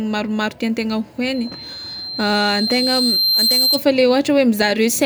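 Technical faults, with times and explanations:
1.34–3.85 s, loudspeaker feedback squeal: a 4.1 kHz tone swells over about two seconds until it is roughly as loud as the speech, because the microphone is re-amplifying its own loudspeaker output and the loop gain at that frequency exceeds unity.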